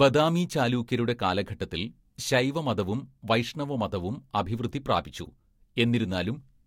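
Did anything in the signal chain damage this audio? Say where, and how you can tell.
Yes: a short glitch at 5.24 to 5.28 s, around -30 dBFS, is a corrupt frame decoded. The codec played a couple of bit-damaged frames, putting energy at the wrong frequencies.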